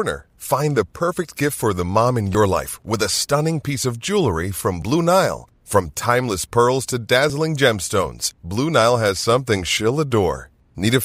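The speech is likely being processed in 2.5-second chunks, with a few tens of milliseconds of audio missing between chunks at each handover. Brief skips, edges butted together, fall at 2.35 s after "mom in", 4.82 s after "piece of jewelry from", 7.30 s, and 9.77 s after "has something".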